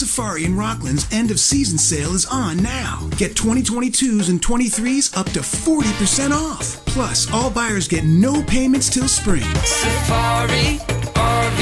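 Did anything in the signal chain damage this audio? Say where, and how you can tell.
No, nothing along the chain has audibly damaged this audio; no stage leaves a mark anywhere in it.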